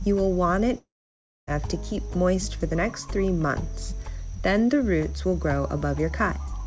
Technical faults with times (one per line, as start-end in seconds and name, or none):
0.78-1.49 long network dropout